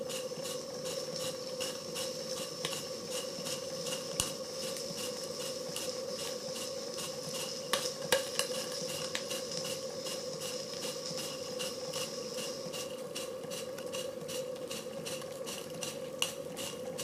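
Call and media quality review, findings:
Corrupt frame decoded: short chirp-like bursts at 5.39–5.44 s and 11.48–11.54 s, peaking around -30 dBFS. Durations suggest two to three damaged codec frames each. Decoder played bit-flipped frames, and misread gains and codes put energy at wrong frequencies.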